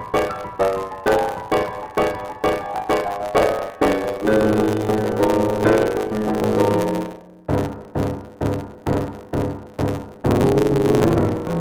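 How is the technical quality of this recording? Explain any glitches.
The recording has one persistent fault. Block size mismatch (truncated) runs throughout: each block's tail is dropped, producing a 100 Hz buzz, regular vertical streaks every 10 ms on a spectrogram, and sound playing 1.09 times fast at near-normal pitch.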